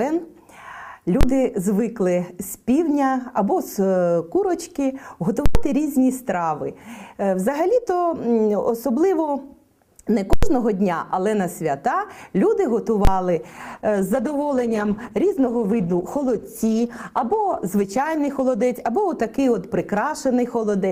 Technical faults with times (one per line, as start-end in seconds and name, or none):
1.21-1.23 invalid numbers at full scale
5.46-5.55 invalid numbers at full scale
10.33-10.43 invalid numbers at full scale
13.05-13.07 invalid numbers at full scale
13.43-20.91 call bitrate drop